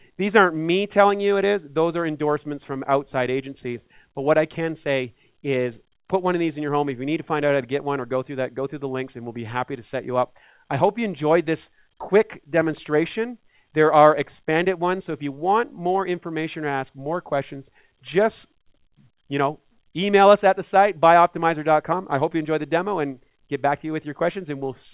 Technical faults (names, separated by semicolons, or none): none